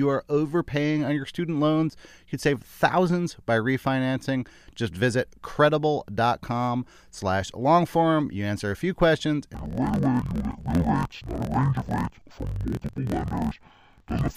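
A speech recording where, from 9.54 s to the end at 14.36 s, interleaved audio is read as planar in blocks of about 23.2 ms, which fits a 1024-sample buffer. The speech drops an octave, sounds doubled, and chops at 43.1 Hz.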